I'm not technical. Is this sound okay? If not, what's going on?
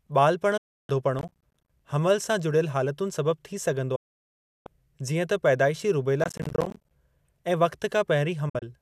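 No. Digital broadcast dropouts occur at 0.57 to 0.90 s, 3.95 to 4.67 s, and 8.49 to 8.63 s. The receiver stopped getting usable data and muted, fading the speech out quickly. The last one is several tiny holes, the longest about 50 ms. The missing speech is simply gone.

Processor overload crackle runs from 1.19 to 1.80 s, just before "हमलु सां", and again from 6.22 to 6.91 s. The computer fell behind and missed about thirty tiny chunks of sound over each stretch, each leaving a brief silent gap. That sounds like gritty tearing over the speech.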